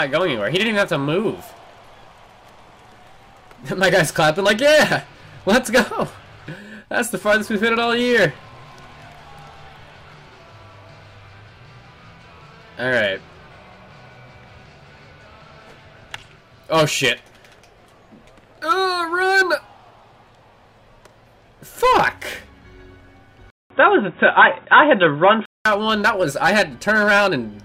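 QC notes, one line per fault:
23.50–25.66 s, input switched to a poorer device: after a 200 ms gap the sound turns boxy with nothing above 3.8 kHz, a small level shift and a faint new noise floor, likely another microphone; that gap and changed noise rule out simple filtering.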